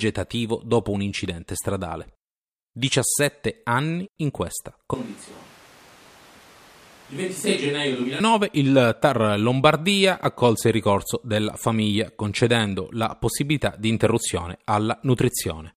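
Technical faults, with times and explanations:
4.94–8.2 s, switch to a distant microphone: after "anni in questa" the speech abruptly turns hollow, about 10 dB quieter, likely because the close mic failed; the waveform shrinks, the spectrogram thins in the bass, and the noise floor rises.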